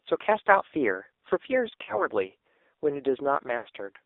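The whole clip has passed through the AMR narrowband mobile codec, which rebuilds speech from a vocal tract model driven by a few pulses per frame, at a very low rate that points to roughly 6 kbps. The line is confined to about 300 Hz to 3.7 kHz, so the speech sounds thin and boxy. The heavy coding damage makes it buzzy and synthetic throughout.

From 1.84 to 2.05 s there are lost AMR speech frames. Frames failed to arrive intact, so the decoder bridged the gap by repeating its last good pitch and vocal tract settings at falling gain. The gap sounds like about 40 ms of missing audio, which fits two 20 ms frames. It is heard as a brief smeared warble and dip, and the speech returns slightly rough.

A longer dropout of lost AMR speech frames follows from 3.58 to 3.69 s. The missing stretch sounds like about 80 ms, which points to four consecutive frames. Here the concealment draws the sound out into a sustained, fading buzz that sinks toward silence before decoding recovers, and the speech comes back weak for a moment.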